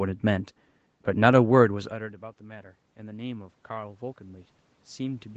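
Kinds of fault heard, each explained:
Automatic gain rising: the gain control sensed the input drop by about 22 dB after the talker moved back, and steadily raised its gain from 1.88 s to the end, so speech and room noise swell up together.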